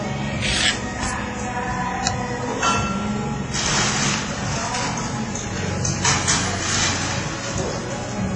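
A recording of sounds, and the whole thing has that ringing, washy quality, with a hiss that swells and fades along with the sound itself. Nothing gets through above about 10.5 kHz, and quieter details seem to drop out entirely. That's most likely WMA compression pushed hard: a transform codec at a low rate, something like 24 kbps, smearing quantisation noise across long blocks and zeroing weaker components.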